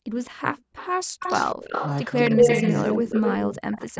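From 0.00 to 0.09 s the background is gated by the echo canceller. While the far-end loudspeaker signal is active, the canceller clamps the microphone path hard, by about 40 dB at its deepest. The room tone drops out for roughly a tenth of a second and then returns. The same gating recurs from 1.06 to 1.18 s, again a brief hole of about 40 dB in the background before it comes back.

An echo leak appears from 0.14 to 0.31 s and again from 0.54 to 0.88 s. A copy of the speech arrives 197 ms behind the original, about 20 dB down in the first stretch and about 15 dB down in the second. The likely cause is a loudspeaker-side echo canceller that fails to remove everything its microphone picks up, so the residue is sent back. The echo becomes sustained from 1.19 to 3.51 s, now at roughly the same level as the direct speech, and it returns from 3.77 s to the end at about 15 dB down, still with the 197 ms delay.

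The speech is suppressed in double talk from 2.37 to 2.47 s, a shallow dip of a few dB lasting about 0.1 s. The likely cause is the canceller confusing the near talker with the loudspeaker echo while both are active. A much deeper suppression runs from 3.48 to 3.96 s, pulling the voice down by around 40 dB for roughly 0.4 s.

The call microphone processing band-limits the whole clip, with nothing above 8 kHz.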